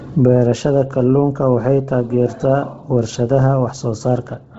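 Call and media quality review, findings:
Speech grainy and breathy whole clip, nothing above 7.7 kHz; likely Bluetooth LC3 compression, upper band zeroed and noise-filled in 10 ms frames, fits a starved bitrate around 16 kbps.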